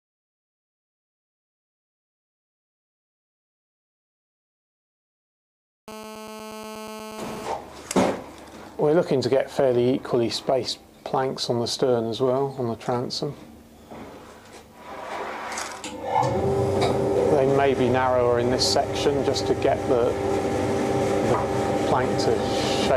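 From 5.88 to 7.47 s, a GSM phone buzz sits about 14 dB below the sound. A nearby 2G handset on a call pulses 217 times a second, and rectified, this gives a steady, raspy buzz. Spectrogram: stacked lines at 217 Hz harmonics; waveform: regular spikes.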